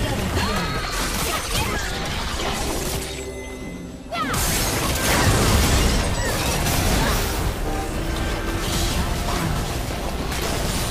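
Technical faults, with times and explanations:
9.67 to 10.91 s, overlap-add ripple: near the end, the audio was split into windowed frames and rebuilt with an overlap whose windows fail to sum to a steady gain, so the level swells and dips once per frame, by about 6 dB, at a rate of around 200 times a second. That periodic gain wobble is too quick to hear as separate pulses and instead comes across as a metallic buzz with extra tones around each note.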